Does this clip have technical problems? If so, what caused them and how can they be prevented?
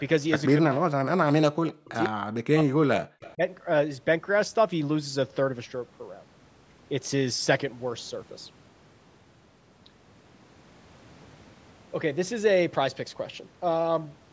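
Yes, two related problems show up early on. First, speech suppressed in double talk: from 0.52 to 1.91 s, briefly at 2.09 to 2.15 s, and again from 2.43 to 3.43 s, the speech dips hard, bottoming out around 40 dB down, for roughly a second in each longer stretch. That's likely the echo canceller hearing both ends talking at once, failing to tell the near talker from loudspeaker echo, and clamping everything. Using a headset or a device with better double-talk handling keeps the canceller from ducking the talker.

Second, there's an echo leak: at 2.04 to 2.09 s and again at 3.22 to 3.34 s you catch a faint copy of the speech trailing 146 ms behind, about 15 dB below the speech in the first spot and about 25 dB below in the second. That's likely the far end playing the call on a loudspeaker, with its canceller letting some of its microphone pickup slip back through. Headphones on that end, or lower speaker volume, would stop the echo coming back.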